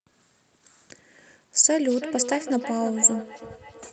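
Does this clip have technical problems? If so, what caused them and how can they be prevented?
Yes. From 1.75 s to the end there is feedback echo between two devices. A nearby device replays the call, and this microphone sends it back. Repeats come roughly every third of a second, about 11 dB below the speech. Using one device per room, or headphones, prevents it.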